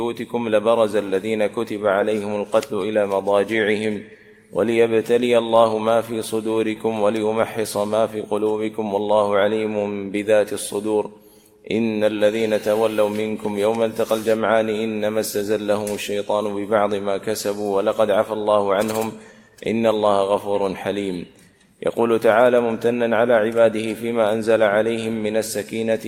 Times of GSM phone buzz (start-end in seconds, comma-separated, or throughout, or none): none